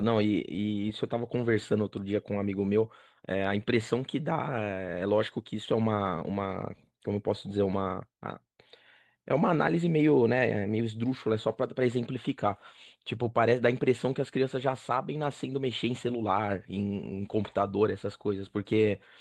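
No technical faults can be heard anywhere in this speech recording, with nothing breaking up the signal at any point.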